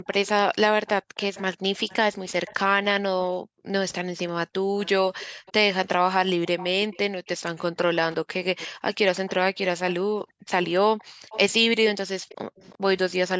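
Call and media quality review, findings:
Background gated by the echo canceller: room tone drops by about 40 dB at 0.00–0.07, 1.02–1.19, 3.31–5.46 and 8.68–12.29 s. The AEC suppressor clamps the mic during far-end playback. Waveform shows noise floor collapsing to near-flat; spectrogram shows broadband gaps.

Echo leak: delayed, quieter copy of the speech trailing by 342 ms, roughly 20 dB under the direct speech, at 0.26–2.54 and 4.83–12.78 s. Likely cause is residual loudspeaker pickup passing the far-end canceller. Spectrogram shows faint duplicated harmonic patterns offset 342 ms.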